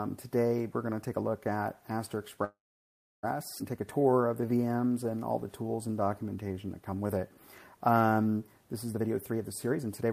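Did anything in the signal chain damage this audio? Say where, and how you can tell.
Yes. From 2.44 to 3.25 s the sound stops, with a brief fading tail and then about 0.68 s of silence. This call audio freeze was likely a network stall that emptied the jitter buffer, inserting 0.79 s.

At 3.6 s playback lurches forward with almost no gap. This skip ahead dropped about half a second at the network or jitter buffer stage, splicing both sides together.

From 3.98 to 8.14 s the audio drags at 89% speed with unchanged pitch and stretched sounds. This jitter buffer slow-down repeated pitch periods, adding 457 ms.

From 8.93 s to the end the audio rushes at 133% speed, pitch intact. This jitter buffer speed-up trimmed pitch periods, removing roughly 0.4 s to shed excess delay.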